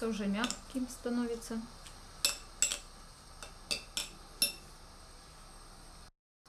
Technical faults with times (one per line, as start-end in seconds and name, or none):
none